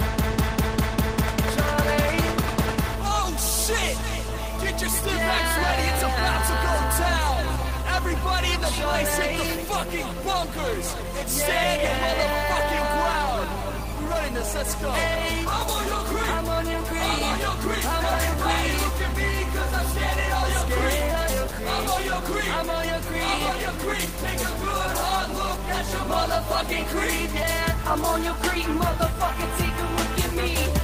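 Clock drift between sender and receiver runs through the whole clip. The sending clock is fast, by roughly four percent. Audio therefore arrives a little quicker than the receiving side plays it out. The jitter buffer keeps filling. Left alone, it would overflow and add ever more delay. The drift itself makes no obvious noise. Its effect is heard instead in how the receiver keeps the buffer in check.

From 7.42 s to 30.56 s, repeated timing corrections occur. To stop the buffer growing, the receiver trims short slices of audio. All the edits go one way, removing material, so playback runs at 104 percent of the original pace. The cuts come at uneven intervals. Each is small.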